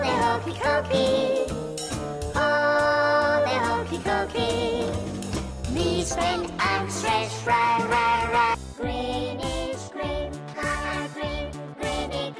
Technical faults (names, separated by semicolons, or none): none